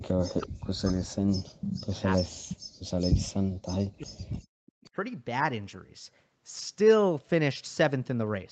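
From 0.00 to 2.33 s the speech dips sharply in pieces, adding up to about two seconds, and falls by around 40 dB at its deepest. This is likely speech suppressed in double talk: with both ends active, the echo canceller could not tell the local talker from loudspeaker echo and turned everything down.

Inside and just after that stretch, at 1.61 s and again at 2.48 s, brief scraps of echo leak appear. Each is a copy of the audio delayed by 392 ms and sitting around 10 dB below the speech, likely loudspeaker sound that the canceller failed to remove and sent back.

From 2.61 to 2.87 s the room background is gated by the echo canceller. The ambience drops by about 40 dB for roughly 0.3 s while the loudspeaker plays, then returns once the canceller releases the microphone.

From 3.61 to 4.91 s speech suppressed in double talk returns, with about a second of affected speech and dips of around 40 dB. 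This is likely the canceller again clamping down during simultaneous talk.

Within that stretch, fainter echo leak shows up at 4.31 and 4.83 s. It has the same 392 ms delay but sits around 30 dB under the speech, likely a smaller residue of the loudspeaker signal getting past the canceller.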